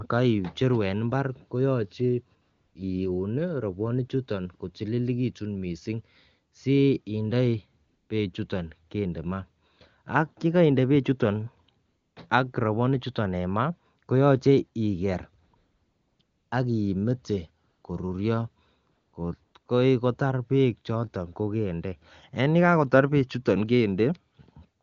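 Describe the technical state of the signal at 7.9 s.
At 7.9 s the signal is in a stretch of AMR comfort noise, running from 7.87 to 8.09 s, just before "bechuton kende maa". For about 220 ms the sender treated the input as silence and sent no speech frames, so the receiver generated smooth synthetic noise from a rough level and spectral shape. On a spectrogram the natural background gives way to a flat, even noise band with abrupt edges; the waveform shows a steady low-level floor.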